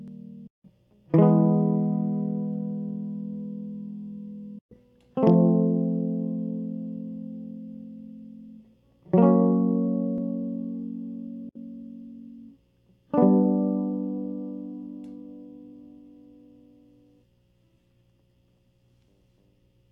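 The music cuts abruptly to silence at 0.47–0.65 s, 4.59–4.76 s and 11.49–11.56 s, then resumes further along, as if it had kept playing. This is likely a Bluetooth dropout, where late packets were discarded before reaching the headphones.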